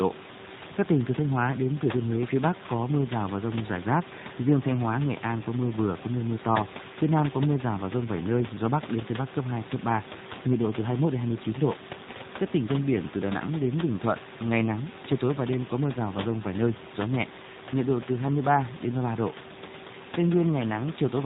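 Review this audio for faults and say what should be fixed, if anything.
G.729 codec damage runs throughout the clip. Nothing above 4 kHz survives, and the speech has the rough, slightly synthetic texture of audio rebuilt from a vocal tract model, a pitch predictor and a few pulses per 10 ms frame, which fits an 8 kbit/s G.729A stream. The room noise, about 15 dB below the speech, warbles as the codec tries to model it. To prevent this, capture or route the call through a wideband codec such as G.722 or Opus.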